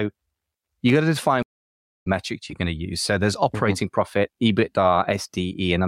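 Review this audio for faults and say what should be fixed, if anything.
Loose connector crackle appears from 0.89 to 0.97 s, just before "got to define". It is a short, irregular burst of scratching. A worn or dirty contact is making and breaking as it shifts. Each break chops the signal, and any DC on the line turns the transitions into pops. The burst lasts under a tenth of a second. Clean or replace the connector and secure the cable so it cannot move.

A stream reconnect follows from 1.43 to 2.07 s, after "got to define". The sound drops out for about 0.63 s. The connection failed and the player went quiet. It then reconnected and began a fresh decoder mid-stream. Playback resumes at "metrics you're going to", roughly half a second further on, so that stretch of speech is lost. Fix the network path and give the player enough buffering to ride out brief dropouts.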